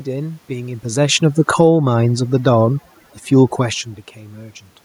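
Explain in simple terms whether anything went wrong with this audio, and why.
Overdone noise removal runs through the whole recording. A noise reduction tool was set too strong. It cut out quiet parts of the voice along with the room noise. So the background drops and breaks up into twinkling specks.

From 0.88 to 1.78 seconds there is automatic gain falling. The level control decided the sound was too loud, or its background too strong, and turned itself down over almost a second. The voice and its background sink together, to a clearly quieter level.

Automatic gain rising follows, from 1.69 to 2.16 seconds. The control now judged the sound too quiet and turned back up. Voice and background swell together over about half a second. This only partly undoes the earlier drop.

Around 0.5 and 3.5 seconds the voice also changes in loudness as the talker moves.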